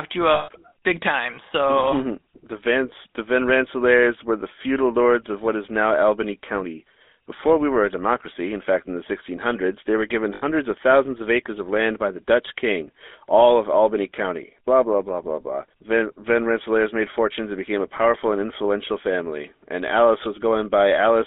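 From the start, the speech carries GSM full-rate codec damage, plainly audible as a buzzy, gravelly roughness. The narrow line band runs from 250 Hz to 3.6 kHz, and the harsh excitation coding fits a 13 kbps rate. A spectrogram shows nothing above 3.6 kHz.

Lost GSM frames follow at 0.34 to 0.60 s and again at 10.34 to 10.43 s. Each gap is bridged by repeating the last good frame, heard as a metallic ring. The waveform shows a repetitive stretch.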